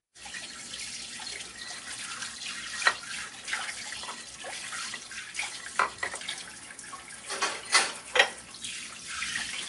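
From start to finish the sound carries plainly audible coding damage: a watery, swirling texture, metallic chirping on bright transients, and smeared attacks. On a spectrogram the content stops dead at a flat ceiling of 11.3 kHz, and the upper bands break into isolated blocks that blink on and off from frame to frame. This is likely MP3 compression at a starved bitrate, consistent with roughly 48 kbps, where the encoder discards treble and zeroes weak frequency lines.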